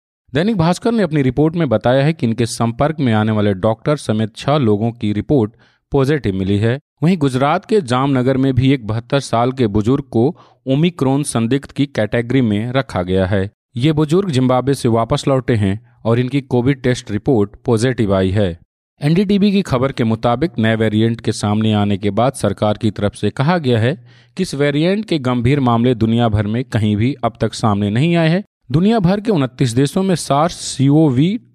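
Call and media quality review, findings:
No audible faults found in the speech recording; no dropouts, glitches or level problems identified on review.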